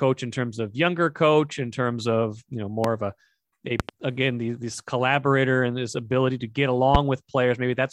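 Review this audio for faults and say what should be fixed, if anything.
Loud pops at 2.84–2.87 s, after "you know", at 3.80–3.91 s as a double pop before "again these this collaborator", and at 6.95–6.97 s after "this ability to get", peaking about 15 to 20 dB above the speech, which continues underneath. Each is likely a voltage pulse from a plug, a switch or a static discharge. Secure the connectors, leave the switches alone while recording, and ground the equipment to prevent them.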